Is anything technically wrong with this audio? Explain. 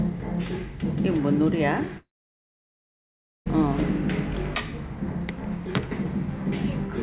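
Yes. From 1.98 to 3.48 s a long network dropout likely cut out about 1.5 s. A brief fading continuation gives way to near silence, then the sound resumes without the missing part. A short glitch would be bridged smoothly instead. Throughout, nothing is heard above 4 kHz, which fits a narrowband telephone-style call codec.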